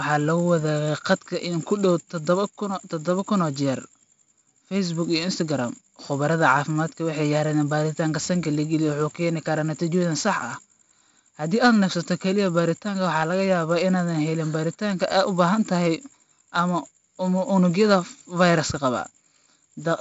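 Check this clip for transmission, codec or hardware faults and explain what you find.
The whole speech clip carries heavy 4-bit ADPCM compression. Each sample is coded as a coarse 4-bit step from a predicted value, with the step size adapting as it goes. The resulting error is a gritty hiss riding on every louder syllable, with roughness on sharp onsets where the step cannot grow fast enough. Nothing reaches above 7.7 kHz, which fits a 64 kbps stream at a 16 kHz sample rate and leaves the speech dull. A spectrogram shows a flat noise floor rising and falling with the speech level and a hard ceiling at 7.7 kHz. The waveform looks stair-stepped on fast transients.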